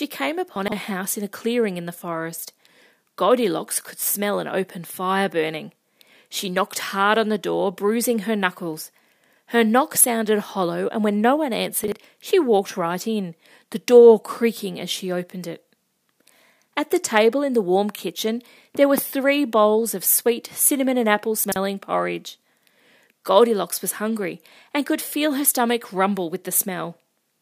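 Chunks out of order: a 40 ms chunk was delivered late and played after its successors, late by three chunks at 0.56–0.72 s, one at 11.84–11.92 s, and two at 21.44–21.56 s. Each spot sounds briefly jumbled.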